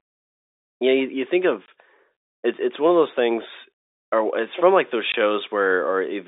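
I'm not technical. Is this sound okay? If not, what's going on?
No. At 1.66 to 1.68 s and 5.12 to 5.14 s the speech briefly drops out. This is packet loss filled with silence: a 20 ms chunk, which fits one lost packet, was replaced by nothing. The narrow telephone-line sound is simply G.711 telephone coding.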